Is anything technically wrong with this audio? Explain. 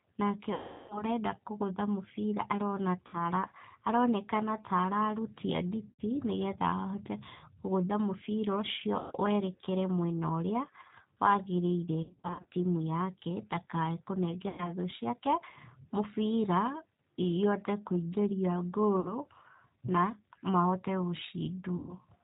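Yes. The whole clip carries plainly audible G.729 codec damage. This 8 kbit/s coder rebuilds speech from a vocal-tract filter, a pitch predictor and a few pulses per subframe, so nothing above 4 kHz survives and the voice sounds rough and faintly synthetic. What separates it from plain narrowband band-limiting is that grainy, buzzy texture inside the band. A simple telephone filter would sound muffled but clean.

There are also eight VoIP packet loss events concealed by the speech codec, at 0.54 to 1.04 s, 3.07 to 3.18 s, 5.90 to 6.02 s, 8.99 to 9.12 s, 12.03 to 12.45 s, 14.49 to 14.71 s, 19.00 to 19.14 s and 21.77 to 21.95 s. In each one the decoder keeps repeating its last pitch and filter settings and lowers the gain, so the sound smears into a fading buzz instead of breaking off. The first event is the longest, with about 360 ms missing, which fits roughly a dozen 30 ms packets. The one near 12 s is different: its losses are scattered in short runs of up to 60 ms across 420 ms. 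The sound also stays weak for a moment after each one, because each rebuilt frame depends on the one before.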